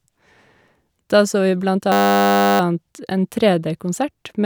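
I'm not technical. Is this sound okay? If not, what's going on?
No. From 1.92 to 2.6 seconds the speech is replaced by a steady buzz. This is a system hang loop. The computer briefly froze, but the sound hardware kept replaying the last tiny scrap of audio it held. That scrap is only 10 milliseconds long. Repeated about a hundred times a second, it stops sounding like speech and turns into a 100 Hz hum. Once the freeze clears, the speech resumes, with essentially nothing missing.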